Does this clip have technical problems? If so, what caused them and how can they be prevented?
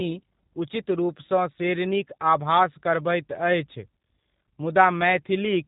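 Yes. Throughout the speech there is damage from the G.729 codec. Nothing passes above 3.8 kHz, and the voice has the slightly rough, buzzy, synthetic edge of speech rebuilt from a vocal tract filter, a pitch predictor and a few pulses per 10 ms frame, which fits an 8 kbit/s G.729A stream. A plain narrowband filter would remove the same top end but leave the voice smooth; this roughness is what points to the codec. To prevent it, use a wideband codec such as G.722 or Opus at a higher bitrate wherever the connection allows.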